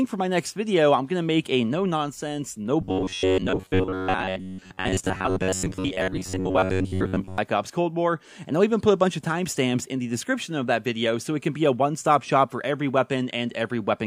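From 2.81 to 7.38 s the sound turns into a rigid, metallic buzz at 93.8 Hz: robotic sound from repeated short buffers. Audio likely arrived too seldom, so a chunk of about 10.7 ms was looped in place of most of the missing material.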